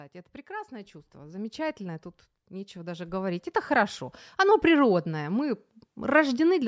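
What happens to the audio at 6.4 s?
Nothing goes wrong at 6.4 s: the speech carries on intact through that moment, with only the usual call microphone processing shaping it, which trims the lowest bass and leaves nothing above 8 kHz.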